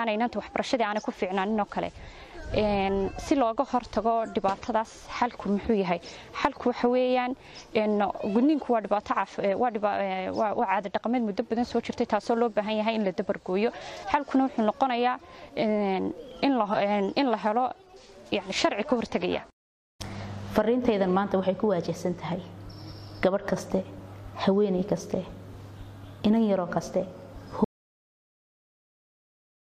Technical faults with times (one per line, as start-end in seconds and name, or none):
27.64-29.69 audio dropout to silence